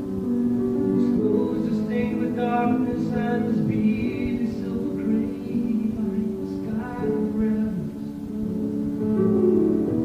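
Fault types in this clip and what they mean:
No technical faults can be heard anywhere in it.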